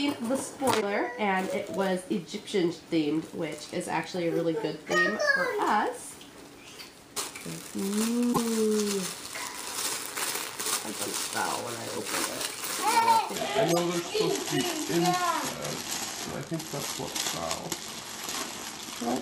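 The audio jumps ahead with a brief glitch at 0.80–0.83 s and again at 8.32–8.38 s, likely a broken MP3 bit reservoir, appearing on a spectrogram as short disruptions about one to two 26 ms frames long. From 13.36 s to the end, a section at the wrong speed plays at 0.778 times normal, about four semitones lower, likely from a clock mismatch, with harmonics visibly shifted downward and the waveform stretched.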